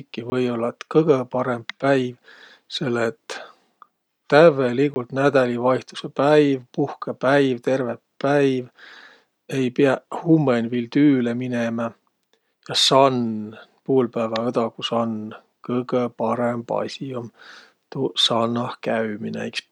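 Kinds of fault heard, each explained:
Block of digital silence: Twice, at 0.30 s and 4.94 s, 20 ms of speech drops to silence. The sound cuts out and back with no fade.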